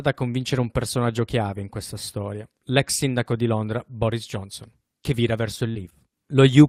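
Short concealed packet loss at 5.71–5.77 s in this speech clip, just after "che vira verso": about 40 ms failed to arrive, and the decoder extended the preceding sound for roughly 35 ms, leaving a brief smear. A lost packet rebuilt from error correction follows at 5.75–5.81 s, where about 40 ms, which fits two packets, was played from low-bitrate backup copies, sounding rougher and noisier.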